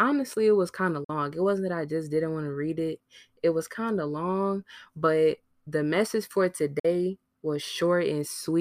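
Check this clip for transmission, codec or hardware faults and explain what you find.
The speech has two short gaps, consistent with a Bluetooth dropout. They come at 1.04 to 1.10 s, after "it was kind of", and at 6.79 to 6.85 s, after "but the message for". Each cuts about 46 ms of sound, which fits a couple of lost packets, likely from late delivery to the headphones. The waveform shows a flat-line hole and the spectrogram a vertical blank stripe. The speech then resumes as though it had carried on underneath.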